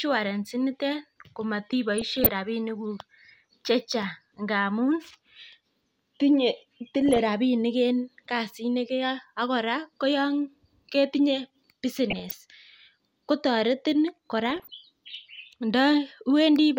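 DAB burbling breaks into the speech at 1.98 to 2.34 s, at 7.02 to 7.19 s just before "rabinik en", at 12.10 to 12.34 s, and at 14.50 to 14.70 s right after "kotoretin kora". Weak reception lets a small share of bit errors, well under one percent, slip past error correction into the MP2 data. Corrupted samples put short blips of noise in single sub-bands, and corrupted scale factors make sub-bands jump in level for up to a frame. The result is short blips of noise layered over the speech, not the clean silent gaps of a dropout.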